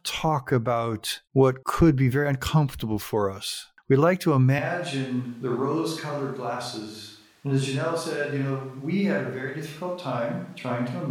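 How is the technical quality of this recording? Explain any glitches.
The recording is compromised by one fault that runs to the end. From 4.59 s onward there is a likely switch to a distant microphone, with the close microphone's signal lost. The speech abruptly turns roomy and hollow, drops by about 5 dB, and background noise rises to roughly 35 dB below the speech.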